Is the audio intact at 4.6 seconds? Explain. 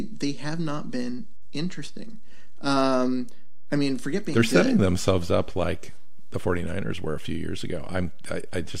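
No. At 4.6 seconds, as throughout, the speech sounds unchanged, but a DC offset of about -27 dBFS shifts the whole waveform off zero, wasting headroom.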